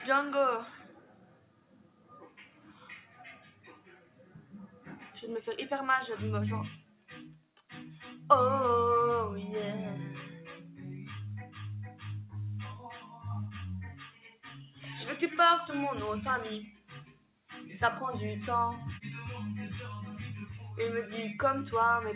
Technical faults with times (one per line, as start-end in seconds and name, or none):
0.00-22.16 noise suppressor applied to music or sounds
0.79-5.18 sound cut by the noise suppressor
6.76-7.09 sound cut by the noise suppressor
7.35-7.70 sound cut by the noise suppressor
10.57-11.10 sound cut by the noise suppressor
11.89-12.04 sound cut by the noise suppressor
13.01-13.25 sound cut by the noise suppressor
13.92-14.87 sound cut by the noise suppressor
16.66-17.50 sound cut by the noise suppressor